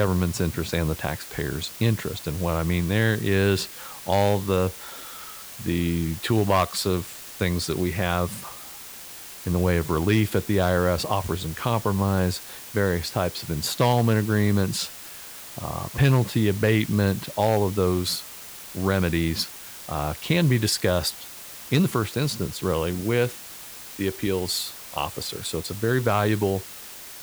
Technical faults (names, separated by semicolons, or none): low bit depth with dither